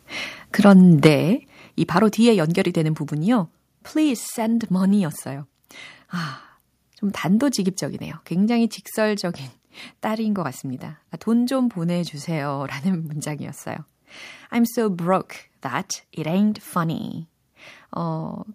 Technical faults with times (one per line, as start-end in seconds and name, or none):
1.05-1.07 microphone overload
1.07 microphone volume stepped down